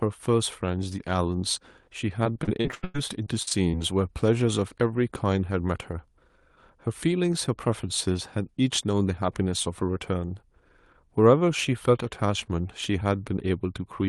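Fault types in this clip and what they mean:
Repeated packet loss (robotic sound): from 2.23 to 3.75 s the call audio breaks into about a dozen short holes, the longest about 97 ms, each patched by stretching the preceding sound, so over a quarter of that stretch turns choppy.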